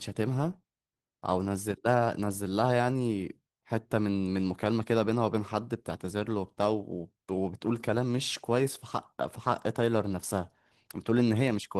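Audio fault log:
throughout: Opus voice compression. Speech sounds hoarse and slightly robotic: the linear-prediction core coarsely codes the excitation below 8 kHz, while a thin transform layer carries the upper band in 20 ms frames. The plainly audible damage fits roughly 16 kbps.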